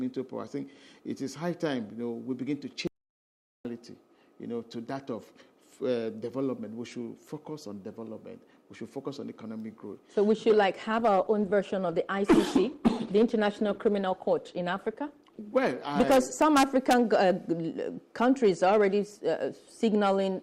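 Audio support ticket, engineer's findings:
Audio dropout to silence, 2.87–3.65 s: input likely lost at capture (device disconnect, failed link or stray mute) while the recorder kept writing silence. Sound cuts out mid-flow and returns after about 0.78 s of silence, no room tone, content gone.

Call bitrate drop, 10.88–16.30 s: bandwidth estimate collapsed and the encoder was throttled from 96 kbps to 20 kbps, holding the floor for roughly 5.4 s. Coarser Opus coding plus high-frequency cutoff makes the sound muffled and watery until the rate recovers.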